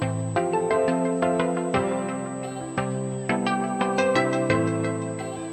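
Current drawn by a USB bus in 125-microsecond microframes is leaking into the audio through the power or ground path, producing USB whine for the full length of the recording. The interference sits at a fixed 8 kHz, which is also its strongest component, matching the microframe rate. It is heard as a thin, steady, high-pitched tone that never changes pitch, running roughly 20 dB below the main signal and riding continuously over everything else in the audio.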